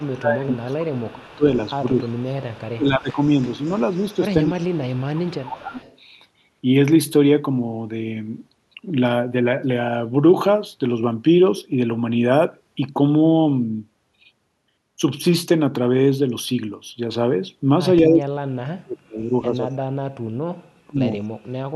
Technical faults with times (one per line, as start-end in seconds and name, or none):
0.00-1.44 speech suppressed in double talk
0.54-2.76 echo leak
1.97-2.40 speech suppressed in double talk
2.76-3.18 speech suppressed in double talk
3.22-4.59 echo leak
4.47-5.79 speech suppressed in double talk
4.96-5.97 echo leak
18.03-21.03 speech suppressed in double talk